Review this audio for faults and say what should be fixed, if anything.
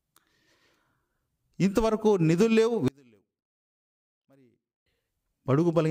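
One channel inverted, from 2.88 to 4.86 s: the sound falls by about 34 dB to a faint residue. One stereo channel has likely flipped polarity, so everything shared by both sides cancels when they are summed to mono. To prevent this, check each channel's polarity and listen to the mix in mono before delivery.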